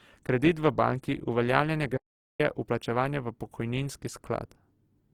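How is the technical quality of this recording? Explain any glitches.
The recording has two clear technical problems: low-bitrate compression damage throughout, and one short dropout to silence.

Throughout, the speech has the rough, grainy texture of Opus compression, likely from an encoder starved of bits, which fits a rate near 16 kbps. It fills sparse bands with folded or noisy content, so tones turn coarse, though the bandwidth stays wide up to about 20.2 kHz.

From 1.97 to 2.40 s there is an audio dropout to silence, likely from a lost input signal while recording continued. For about 0.42 s the sound cuts to total silence with no room tone.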